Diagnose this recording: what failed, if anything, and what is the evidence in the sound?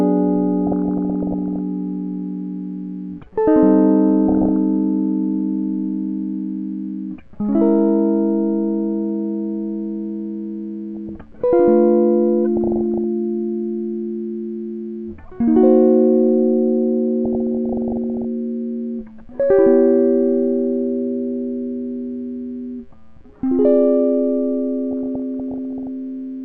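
The music has a dull, gurgling, granular quality throughout, which is likely MP2 compression at the codec stage, at a rate that fits about 80 kbps. Too few bits switch off upper sub-bands, so a spectrogram shows a ragged, flickering ceiling with empty blocks above it.

DAB burbling, a reception and transmission-stage fault, breaks into the music at 0.67–1.59, 4.28–4.56, 10.96–11.21, 12.57–13.04, 17.25–18.25 and 24.91–25.87 s. Bit errors slipping past error correction corrupt sub-band samples and scale factors, leaving short isolated patches in single sub-bands, up to a frame long, on the spectrogram.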